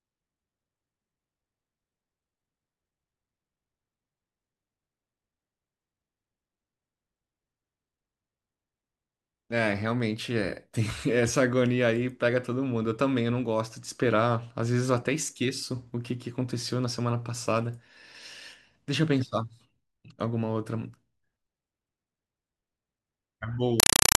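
Speech, abruptly replaced at 23.80 s by a compressed stream played as audio. Until 24.18 s it is loud, chattering static: 4 ms noise bursts repeating 31.25 times a second, separated by silence. That pattern is an AC-3 bitstream treated as ordinary samples rather than decoded. The strict rhythm of bursts and gaps distinguishes it from random digital noise or clipping.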